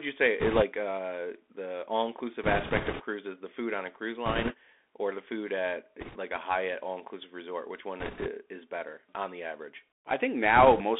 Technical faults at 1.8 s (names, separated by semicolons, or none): Bluetooth CVSD headset codec